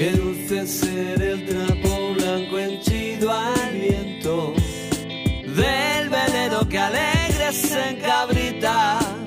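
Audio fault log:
throughout: block size mismatch (truncated). One stage hands on longer blocks than the next one reads, so the tail of every block is discarded. Each cut leaves a seam, heard as a steady 43.1 Hz buzz, which fits 1024-sample blocks. The speed stays at 1.0x.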